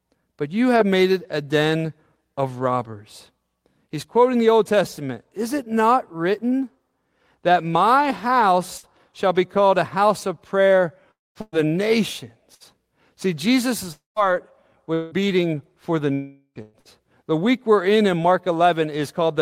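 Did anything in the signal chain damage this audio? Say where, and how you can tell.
Yes. Several bursts of packet loss at the network stage hit the audio at 8.77–8.86 s, just before "shall be called a"; 11.41–11.55 s, after "a house of prayer"; and 12.54–12.63 s. At each, the last sound is stretched into a fading buzz or hiss, and 60 to 120 ms of speech is skipped.

Three longer gaps at 11.11–11.38 s, 13.92–14.19 s and 16.13–16.58 s sound like the receiver's concealment running out of material. The held sound decays into dead silence lasting up to about 210 ms before speech resumes further on, most likely a long network dropout.

From 14.94 to 16.88 s, repeated packet loss gives a choppy, robotic quality. Three separate holes, the longest 172 ms, are each patched by repeating the previous sound. Around 18% of that stretch is synthetic fill rather than received audio.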